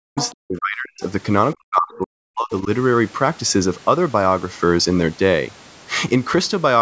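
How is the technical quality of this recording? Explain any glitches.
The recording is a call-path speech capture, with its lowest bass taken out by the call microphone processing, and with three kinds of fault in the first five seconds.

From 0.0 to 1.02 s, and again from 1.54 to 2.69 s, the talker's speech sinks and breaks up, falling by as much as roughly 40 dB for about a second in each stretch. This is likely speech suppressed in double talk: the echo canceller, unable to separate near speech from loudspeaker echo, turned both down together.

Between 0.16 and 0.34 s a second, weaker voice sits under the talker at roughly 10 dB below the speech. This is the other side's voice leaking through, likely because the echo canceller left residual loudspeaker sound in the microphone signal, heard here as a brief fragment.

At 4.63 s there is a single sharp click. This is dropped samples, likely only a couple of them, about 0.1 ms of audio. 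Nothing audible is lost, but the waveform jumps abruptly between non-adjacent values, producing a thin broadband tick.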